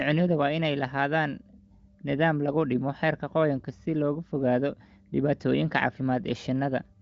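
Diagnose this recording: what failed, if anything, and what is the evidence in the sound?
Nothing failed here: the speech has gone through the AMR wideband (HD Voice) codec at 23.05 kbit/s, which leaves at most faint coding traces, and its content stops around 7.5 kHz, as expected for a wideband voice path.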